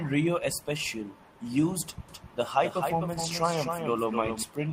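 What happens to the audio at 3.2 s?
At 3.2 s the audio turns briefly rough and noisy, from 3.13 to 3.31 s. This is a lost packet rebuilt from error correction: about 100 ms of audio went missing, and the decoder filled it from low-bitrate backup copies.

Under this, a doubled audio track runs from 2.09 to 4.43 s. A full-band copy trails about 300 ms behind, around 5 dB quieter, with no room colour, and starts and stops abruptly. It likely comes from a second, slower capture path mixing the same audio in again.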